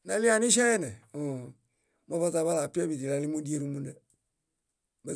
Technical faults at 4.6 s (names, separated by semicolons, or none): none